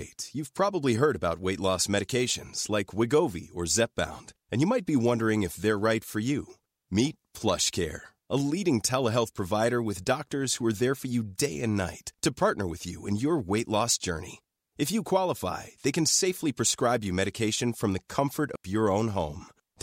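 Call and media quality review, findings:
Digital wireless dropout, 18.56–18.65 s: receiver loses too much link data and mutes for about 89 ms, leaving a clean near-silent hole in the speech, no noise burst.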